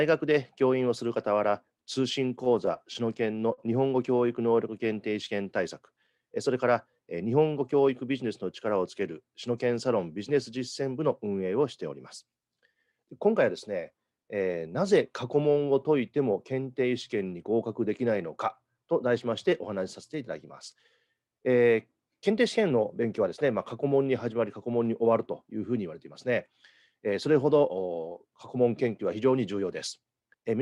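From 2.29 to 3.60 s there are repeated stalls, a stutter. Packets arrived late, so the jitter buffer ran dry nine times. Each gap was bridged by extending the last sound. Together the gaps fill 121 ms, the longest 43 ms. Nothing is lost, but the audio drags and hiccups.

From 4.27 to 5.44 s comes a jitter buffer slow-down. The buffer needed a reserve, so short stretches were repeated over and over. That adds 91 ms. Playback runs at 93 percent speed with unchanged pitch, and sounds are drawn out.

Jitter buffer speed-ups follow at 7.53 to 8.43 s, 22.58 to 23.05 s and 30.21 to 30.43 s. Too much audio had piled up in the buffer, so tiny pieces were cut out to reduce delay. Around 70 ms goes in the first case and about 40 ms in each of the others. Speed rises to 108, 107 and 113 percent. The pitch holds, and the sound feels hurried.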